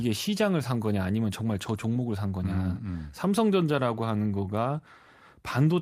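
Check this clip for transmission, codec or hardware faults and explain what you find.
Nothing in the speech points to a transmission, codec or hardware problem; there is nothing to report.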